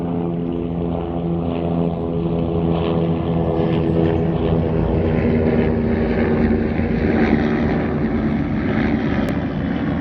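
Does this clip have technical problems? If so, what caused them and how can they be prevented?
Yes. A doubled audio track runs through the whole clip: a second, full-band copy of the sound trails the original by roughly one and a half seconds, about 5 dB quieter, with no decay or room colour, so events return as a flat, detached repeat. This is likely the audio being captured twice, once through a slower path, or an edit that left two copies stacked out of step. To prevent it, route the source to the recording through a single path and check edits for leftover duplicate tracks.

A dropped buffer (overrun) occurs at 9.29 s, heard as a small jump in the sound rather than a gap. About 10 ms of audio is missing and the two sides are butted together directly. This likely happened because the program did not collect the incoming samples before the hardware overwrote them. To prevent it, use a larger buffer and keep the recording process free of competing load.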